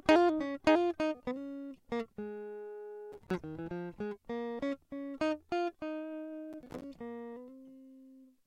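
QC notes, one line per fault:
3.12–3.38 s and 6.53–6.84 s, processor overload crackle: Two bursts of gritty crackle tear through the music, each lasting about a quarter to a third of a second. The processor fell behind and missed many buffer deadlines in a row. Each miss dropped a tiny slice to silence with hard edges. The rapid gaps fit short buffers of a few milliseconds. Strung together, they sound like tearing that stops once the load clears.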